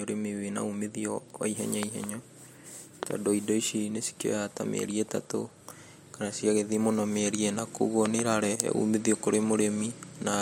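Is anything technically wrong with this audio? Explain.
Yes. The speech is hit by loud pops, three times: just after "wa ihenya" at 1.83 to 2.06 s, then at 3.03 to 3.13 s, and at 8.06 to 8.21 s. Each is a sharp double pop standing roughly 15 dB above the speech, the last closer to 20 dB, while the talking continues underneath. The likely cause is a sudden voltage step or spike, such as from a switch, static or a driver glitch, entering the signal path.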